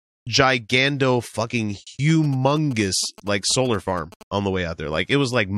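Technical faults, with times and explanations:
2.09–4.23 s, GSM signalling bursts: after "gigando fucking", a galloping dit-dit-dit of short 217 Hz buzzes, well below the speech, from a nearby phone's radio bursts rectified by the circuit, stopping before "on the".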